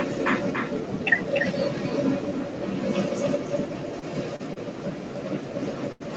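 Speech clip with an echo leak running through all of it: a delayed copy of the voice trails the direct sound by about 291 ms, only a little quieter than the speech itself, most likely from a far-end loudspeaker whose echo canceller let the pickup back through. Short stalls from late packets stretch the sound at 3.99–4.04 s (26 ms), 4.36–4.41 s (34 ms), 4.53–4.58 s (26 ms) and 5.92–6.02 s (82 ms). The jitter buffer ran dry each time, so the last sound was held and then resumed without loss. The audio is band-limited to about 8 kHz.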